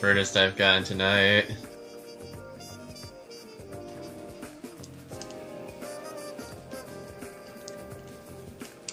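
No technical faults can be heard anywhere in the recording. Nothing in the sound calls for comment from an engineering standpoint.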